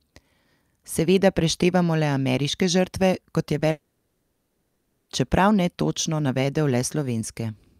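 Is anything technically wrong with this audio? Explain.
Yes, two faults.

Just after "ameriške žrtve kot je", at 3.59 to 3.63 s, the speech briefly smears. This is short concealed packet loss: about 20 ms of audio arrived too late, so the receiver stretched the preceding sound to bridge the gap before blending back.

From 3.71 to 5.11 s the speech gives way to a fading, buzzy or hissy continuation of the last sound, and there is no true silence, until "čeprav netočno navedel" resumes. This is likely a long network dropout, with about 1.38 s of audio never arriving and being replaced by the receiver's synthetic fill.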